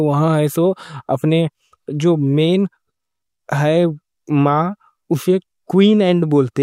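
No audible faults turn up anywhere in this speech recording.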